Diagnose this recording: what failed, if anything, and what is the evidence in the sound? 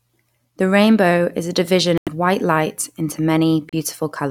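Speech drops to dead silence twice, then resumes where it left off: for about 92 ms from 1.98 to 2.09 s, between "rainbow is a division" and "white light into", and for about 34 ms from 3.69 to 3.75 s, just after "white light into". The likely cause is a Bluetooth stall at the wireless playback link: interference delayed packets, the headphone buffer emptied, and output paused until the retransmitted audio arrived.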